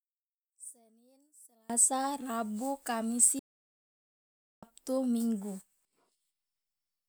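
From the start to 1.70 s the speech is heard only faintly, about 26 dB down, before jumping to full level. This is one channel inverted. With one side's polarity likely reversed, the parts common to both channels cancel when summed to mono, leaving only their small difference. A simple level drop would just be quieter, and the abrupt return to full body at 1.70 s points to cancellation rather than a fade.

At 3.39 s the speech stops mid-flow and stays completely silent until 4.63 s, a gap of about 1.23 s. This is a playback stall: the output goes quiet, likely because no audio is reaching it, then resumes. It differs from a dropout or packet loss, which leave short gaps or garbled fragments of a few milliseconds. Here the silence is clean, long and unbroken, and the sound picks up again after a single clear break.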